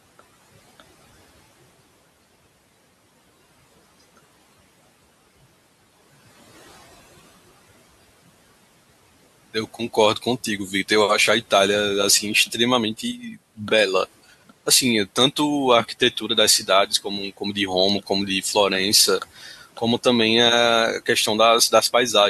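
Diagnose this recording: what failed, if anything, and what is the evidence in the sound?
The call-processing stage failed: the noise suppressor mistook part of the speech for background and attenuated it along with the room noise. Between 19.22 and 19.82 s, stretches totalling around a fifth of a second are pulled down by as much as about 11 dB, so quieter speech energy sounds swallowed and faint. The steady room noise, about 23 dB below the speech, is what the suppressor was tracking, and its gain decision clipped low-level speech sitting near that floor.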